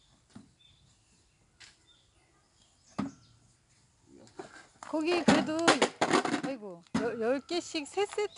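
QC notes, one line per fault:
throughout, 4-bit ADPCM compression: gritty hiss rides on every loud sound and rises and falls with it, attacks sound rough, and nothing remains above 10.6 kHz. Each sample is coded as a coarse 4-bit step from a prediction, a scheme whose data rate points to about 89 kbps.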